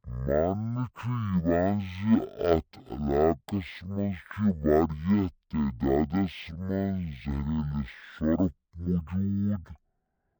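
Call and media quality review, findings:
Stereo read as mono, throughout: speech at half speed, an octave low. Interleaved left/right samples decoded as one channel; likely channel-count mismatch in decoder or playback path.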